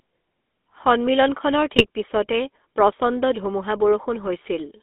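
GSM full-rate codec coloring runs through this entire speech recording, audible as a plainly buzzy, gravelly roughness and a band confined to roughly 250 Hz to 3.6 kHz, which fits the 13 kbps full-rate coder. That coder models the vocal tract as a filter and drives it with a sparse, regularly spaced pulse excitation that keeps only every third sample, so the fine texture of the sound is rebuilt coarsely and nothing high survives. GSM bit errors strike from 1.72 to 1.86 s, where the sound breaks into squawking, popping garble. That span points to about four corrupted frames, consistent with a bit error rate near 2% on a weak link. Flipped bits in the filter, pitch and gain parameters make the decoder warp the spectrum and jump the level frame by frame.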